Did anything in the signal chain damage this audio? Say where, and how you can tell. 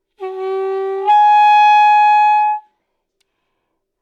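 No, nothing damaged this audio.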